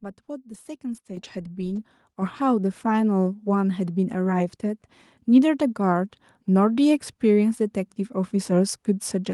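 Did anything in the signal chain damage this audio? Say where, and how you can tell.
Yes. The damage comes from call processing: the microphone volume stepped up twice. At 1.17 s the level jumps by about 7 dB in a single step. At 2.22 s it jumps again by about 4 dB. The voice and the background noise rise together, so the talker did not get louder. The call software judged the input too quiet and raised the device's input volume at once instead of ramping it.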